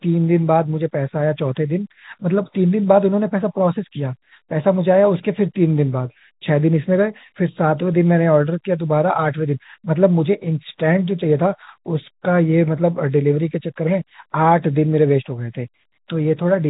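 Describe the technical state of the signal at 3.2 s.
At 3.2 s the speech is intact, with no fault; it carries the ordinary G.711 telephone coding, so nothing above 4 kHz comes through and only a faint level-following quantisation noise sits beneath it.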